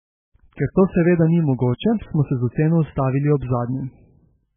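Speech runs through MP3 compression damage for the whole clip. Nothing is heard above about 3.5 kHz, so the treble is gone and s sounds lose their hiss. The damage is heavy. Quieter detail flickers in and out between frames, giving a watery, swirling texture. Consonant onsets smear. The likely cause is an MP3 encode starved of bits, which fits a very low bitrate of around 8 kbps. The encoder dropped the top band and zeroed weak components.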